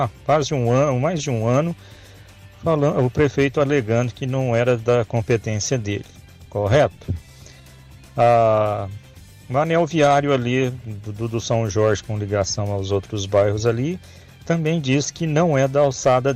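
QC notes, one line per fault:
No faults detected.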